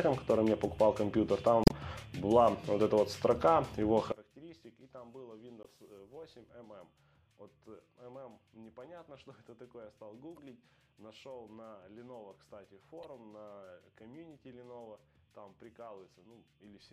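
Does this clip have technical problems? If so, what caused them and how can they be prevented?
Yes. At 1.64 to 1.72 s, 5.63 to 5.66 s, 10.36 to 10.39 s and 13.03 to 13.05 s there are brief chirps and blips, the first shifting timing by about 10 ms. These come from damaged data in a compressed stream: the decoder misreads corrupted frames and resyncs. Verifying file integrity with checksums and using error-protected transport prevents this.

From 4.12 s to the end, the centre of the sound collapses, dropping about 24 dB and leaving a faint residue. The likely cause is one channel inverted, so the shared content cancels when the channels are summed to mono. Checking polarity on every channel before the mono fold-down prevents this.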